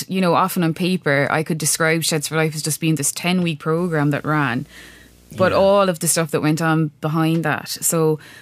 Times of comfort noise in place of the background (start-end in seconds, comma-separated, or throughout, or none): none